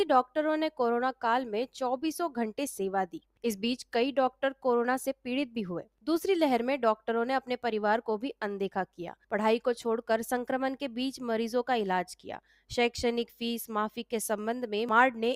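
Sound cut by the noise suppressor at 12.44 to 12.7 s: treated as noise, the audio drops by about 9 dB over around 150 ms.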